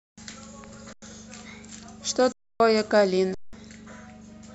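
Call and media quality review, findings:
Underrun with held sample, 0.93–1.02 s, 2.32–2.60 s, 3.34–3.53 s. Output buffer starved; converter holds last value, speech flattens, resumes after roughly 0.1, 0.3, 0.2 s lost. Gaps fit 4096-sample blocks.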